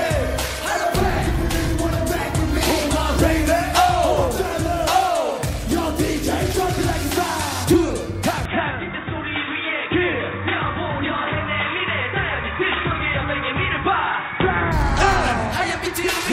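At 8.45 s the audio abruptly turns dull and boxy. Everything above 3.8 kHz vanishes, and a faint new background noise sits roughly 45 dB under the signal, with no gap and no obvious jump in loudness at the change. At 14.72 s the full bandwidth returns just as suddenly. The likely cause is an input switched to a poorer device, such as a headset's narrowband call profile, for that stretch before the original microphone took over again.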